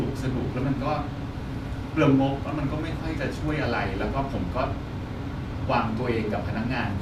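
Nothing in this speech recording stands out as a technical fault anywhere along the way, so there's nothing to flag here.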